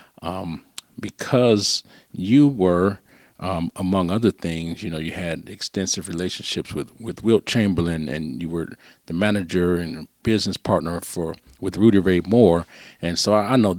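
No technical faults can be heard anywhere in this speech recording.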